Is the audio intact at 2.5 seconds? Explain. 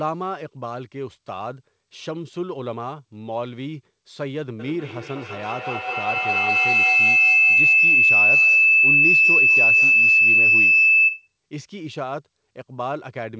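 Yes, the audio is intact at 2.5 seconds, with no dropout, glitch or other fault at that moment.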